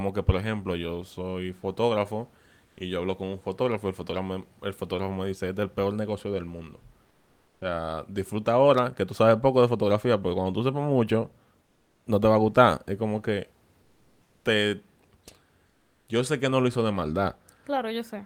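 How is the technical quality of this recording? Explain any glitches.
The pauses in this speech clip have one recurring glitch: comfort noise in place of the background. At 2.65–2.77 s (after "ejemplo yo soy fotógrafo"), 7.07–7.61 s (after "peor negocio del mundo"), 11.65–12.05 s, 13.81–14.45 s (after "como que") and 15.67–16.07 s, the room's background noise, about 42 dB below the speech, turns flat and textureless and dips about 1 to 4 dB. The likely cause is discontinuous transmission: the sender goes quiet when no speech is detected, and the receiver fills the gap with synthetic shaped noise.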